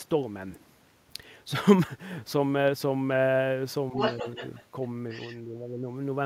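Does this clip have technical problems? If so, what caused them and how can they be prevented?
Yes. Other side's voice leaking through appears at 3.95 to 4.64 s, where the second voice sits only about 5 dB under the talker, then faintly at 4.83 to 4.87 s and about 20 dB under the talker at 5.1 to 5.37 s. The likely cause is a loudspeaker playing the far end into the microphone, with the echo canceller leaving residue behind. Using a headset, or tuning the echo canceller to converge better on the room, would prevent it.

Speech suppressed in double talk shows as dips of around 5 dB in the talker's level at 4.23 to 4.41 s, briefly, and at 5.44 to 5.79 s, for most of that stretch. Both sides were talking at once, and the echo canceller likely could not separate the talker from the echo, so it turned the whole signal down. A canceller with better double-talk detection, or a headset, would prevent this.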